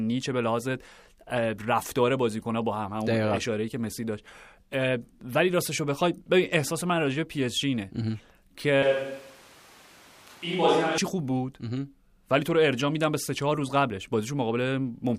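From 8.83 s to 10.98 s the speech turns abruptly roomy and hollow, with thinner bass, a level drop of roughly 5 dB and background noise rising to around 30 dB below the speech. This is likely a switch to a distant microphone after the close microphone's signal dropped out, with an equally sudden return.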